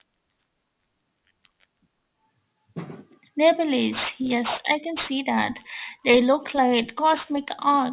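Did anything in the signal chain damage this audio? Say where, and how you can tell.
Yes: throughout, sibilants sound gritty and metallic, crowding 4 kHz. This is aliasing from unfiltered sample-rate conversion, fitting an 8 kHz rate, with higher content folding back down.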